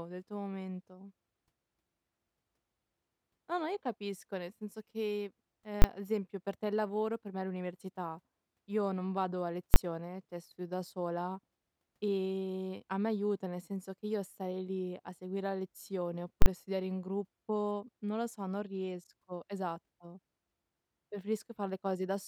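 A speech recording with three sharp bangs where the signal slams to one extreme value: at 5.82 s and 9.74 s, each a 20 ms block, and a twice as long 40 ms block from 16.42 to 16.46 s. That's the invalid numbers at full scale fault: some calculation spat out infinite or invalid values, which got pinned to the largest sample value. Blocks this short just come across as a single loud bang each rather than separate pops.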